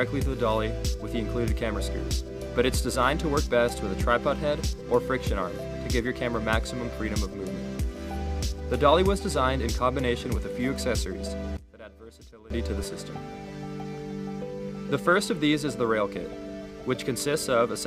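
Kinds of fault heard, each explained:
One channel inverted: from 11.57 to 12.50 s the sound falls about 21 dB, likely because one channel's reversed polarity cancels shared content in mono.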